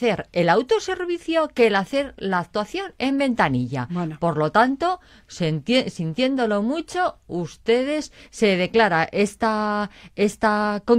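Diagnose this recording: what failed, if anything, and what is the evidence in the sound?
Nothing failed; no stage shows any audible fault.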